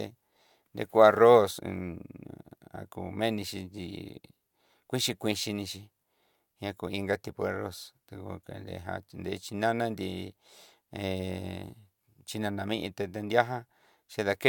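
Nothing in the speech stood out as a technical fault on listening.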